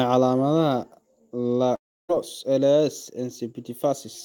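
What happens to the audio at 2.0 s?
At 2.0 s the clip is inside a gap that runs from 1.75 to 2.11 s. The last sound before it smears into a fading buzz that sinks to near silence for most of the stretch, and the speech then resumes with about 0.34 s simply gone. This is likely a long network dropout with the receiver concealing the loss. Unlike a brief packet-loss glitch, the filler runs out and leaves silence, and nothing is replayed afterward.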